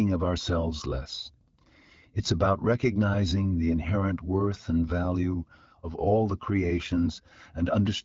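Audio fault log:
Nothing stood out on listening to this speech clip.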